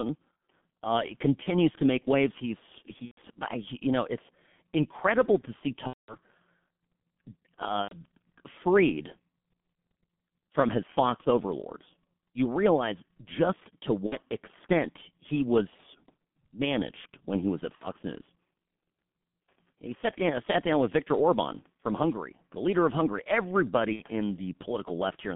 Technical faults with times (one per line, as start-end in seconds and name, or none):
0.00-25.36 G.723.1 codec
1.43-1.52 VoIP packet loss concealed by the speech codec
3.05-3.19 VoIP packet loss concealed by the speech codec
5.87-6.16 VoIP packet loss concealed by the speech codec
7.82-7.95 VoIP packet loss concealed by the speech codec
14.06-14.17 VoIP packet loss concealed by the speech codec
17.75-17.88 VoIP packet loss concealed by the speech codec
23.93-24.03 VoIP packet loss concealed by the speech codec